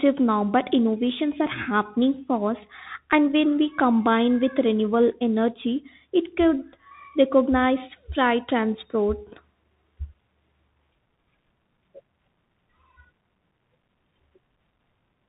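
From start to finish the speech carries the sound of a Bluetooth CVSD headset codec, which fits a 64 kbps headset link. CVSD sends one bit per sample, just up or down, with a step size that keeps adapting, and the damage here is plainly audible. Everything above 4 kHz is gone, loud bright moments outrun the step and distort, s sounds come out scratchy, and there's a grainy hiss sitting under the whole clip.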